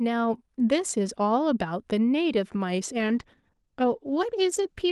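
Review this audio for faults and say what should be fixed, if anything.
Call bitrate drop from 2.98 s to the end. The encoder starved of bits, so speech turns coarse and muffled, which fits a fall from 64 to 14 kbps. Fix it by holding a higher minimum bitrate, or by steadying the bandwidth estimate so it doesn't collapse.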